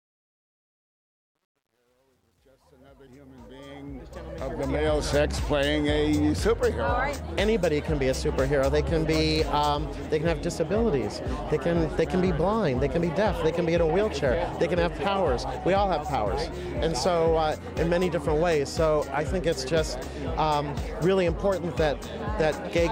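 Truncation distortion on a fade runs from 0.0 to 5.06 s, across the fade-in. The gain stage behind the fade kept too few bits, about 10, and added no dither, so the rising signal is forced onto a coarse staircase of levels. It is worst from 0.0 to 3.61 s, where the quiet start sounds gritty before the fade smooths out.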